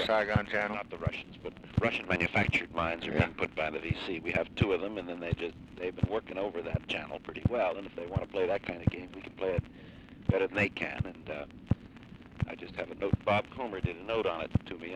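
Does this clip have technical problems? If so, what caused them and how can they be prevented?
No, no technical faults heard.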